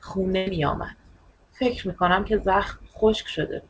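At 0.37 s a burst of packet loss removes about 100 ms of the speech, running to 0.47 s. The receiver filled the hole by extending the last sound it had, so roughly 96 ms of concealment plays as that sound held and fading before the speech jumps ahead. On a spectrogram this appears as a frozen spectrum dimming toward 0.47 s, then an abrupt restart. Nothing shows above 8 kHz anywhere, which is the band limit of the call path's G.722 coding.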